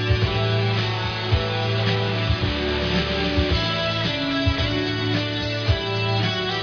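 Nothing here sounds wrong at all; the audio runs along without a single technical problem to point out.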